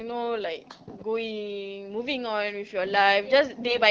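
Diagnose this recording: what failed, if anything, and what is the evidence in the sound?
AMR bit errors, 3.67 to 3.80 s, at the network (radio link) stage. Over about 0.13 s, roughly six 20 ms frames, the speech keeps its pitch and level but turns hoarse and gargly. A few percent of weakly protected bits arrived flipped, so the excitation pulses and fine gain and spectrum values decode wrong in the AMR-WB stream.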